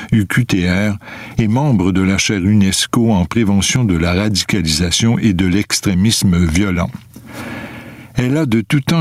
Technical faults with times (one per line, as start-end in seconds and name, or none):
0.00-9.01 gain pumping